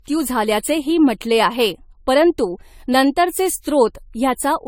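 Generation loss runs through the whole of this speech recording, from start to finish. The sound is swirly and hollow, and attacks are smeared. The damage is heavier than a single encode at this quality would leave, which fits an AAC-LC stream around 64 kbit/s that was likely decoded and re-encoded about five times. Each pass quantised on a shifted frame grid, so noise stacked up.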